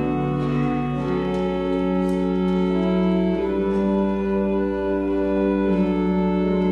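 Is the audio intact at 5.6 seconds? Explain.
No. At 5.6 seconds there is mains hum, which runs through the whole clip rather than starting or stopping there. A ground loop or nearby transformer has let the 60 Hz power line leak into the signal, producing a steady low tone with some low harmonics, sitting roughly 20 dB below the audio. Unlike rumble from handling or wind, which wanders in pitch and level, this hum holds one fixed pitch and never changes.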